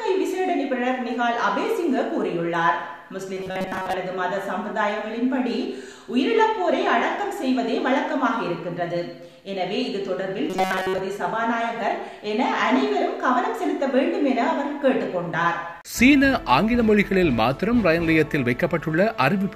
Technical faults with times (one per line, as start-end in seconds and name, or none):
3.34-3.94 robotic sound from repeated short buffers
10.50-11.00 robotic sound from repeated short buffers